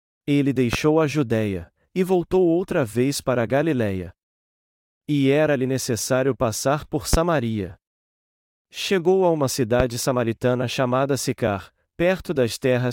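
At 0.73 s, at 7.13 s after "necessário passar por", and at 9.80 s between "a uma" and "samaritana chamada", a single loud pop of about 0.03 s stands roughly 15 dB above the speech, likely from a sudden voltage spike. Unlike a dropout, the speech continues underneath.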